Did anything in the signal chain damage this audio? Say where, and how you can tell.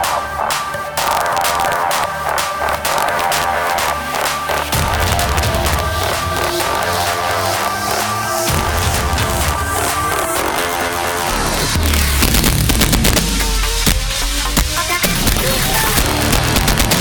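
Yes. The damage happens at a fixed-point gain or sample-format conversion stage, and it lasts the whole clip. There is integer overflow. Gain pushes the signal about 3 dB past full scale, and the arithmetic has no limiter. So each peak over the limit wraps to the opposite sign instead of flattening. Only around one percent of samples cross that line. Each one jumps across the full range, giving violent cracks on loud passages, much harsher than ordinary clipping.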